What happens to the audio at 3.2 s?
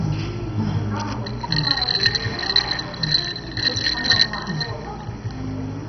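At 3.2 s the sound is dull and gurgling, with nothing above about 6.1 kHz, as throughout the clip. This is likely heavy MP2 compression at a very low bitrate, around 32 kbps, switching off upper sub-bands.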